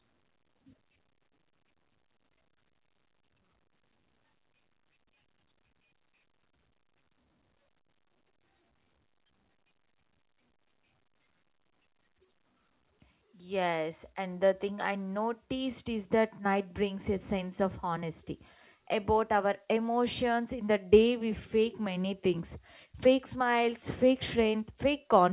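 No technical faults are audible in this speech.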